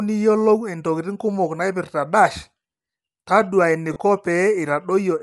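Bluetooth LC3 compression runs through the whole speech clip. The upper spectrum sounds thinned and partly replaced by noise, giving consonants and vowels a breathy, grainy edge that is plainly audible. This is likely the low-delay transform coding of Bluetooth LE Audio. The damage is consistent with a moderate rate of around 48 kbps in 10 ms frames, where the encoder drops high-frequency detail and fills the gaps with synthetic noise.

Lost LE Audio frames occur from 3.93 to 3.96 s, a gap of 30 ms that fits three consecutive 10 ms frames going missing over the wireless link. The decoder covered the hole by repeating the last good spectrum with randomised phase signs. That turns the speech at that spot into a short, noisy smear in place of clean harmonic sound, before normal decoding resumes.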